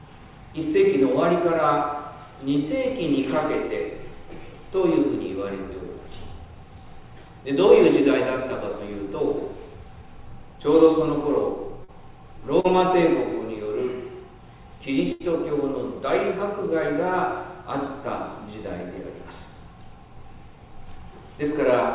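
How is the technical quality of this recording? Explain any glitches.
Three packet-loss glitches stand out, heard over a call path with nothing above 4 kHz, which points to G.711 mu-law at 64 kbps.

Short concealed packet loss at 11.84 to 11.91 s and 12.60 to 12.67 s: about 40 ms of audio never arrived, and the receiver extended the previous sound, leaving brief smears.

Burst of packet loss at 15.12 to 15.23 s: roughly 80 ms went missing in a run, so the extended sound fades away before the audio resumes further on.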